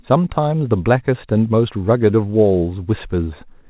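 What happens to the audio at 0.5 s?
Nothing goes wrong at 0.5 s: the speech passes through intact, carried over the WebRTC call path with its G.711 mu-law coding, which holds everything below 4 kHz.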